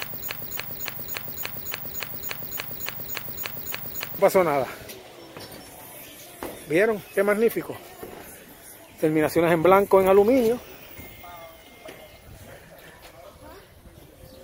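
From the very start until 4.19 s, a broken-record loop is already under way: one 0.29 s fragment repeats identically, back to back, 14 times, most likely because the player or stream stalled. Unlike an echo, each repeat is exact, with no decay, and the missing audio never returns.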